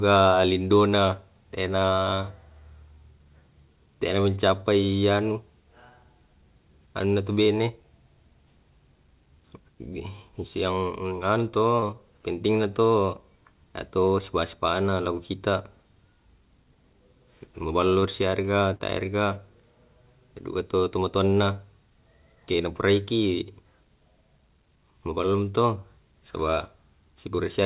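At 11.80 to 11.84 s, just before "penting na to", there's a short concealed packet loss: about 20 ms of the call arrived too late for the decoder, and the receiver patched the hole by stretching out whatever sound it had last, then crossfaded back into the real signal. You hear it as a tiny smear or wobble in the speech. The same thing happens again at 18.00 to 18.04 s, another roughly 20 ms gap filled in the same way.

Not long after, at 18.74 to 18.82 s, comes a burst of packet loss. Around 60 ms went missing in one go, longer than the receiver can hide cleanly. It kept extending the last sound while fading it down, so that stretch comes out as a brief held buzz or a dying hiss, depending on what was playing. The speech then picks up a little further along, with the part in between simply gone. Underneath all this, the band stops at 4 kHz, which fits a G.711 A-law call at 64 kbps.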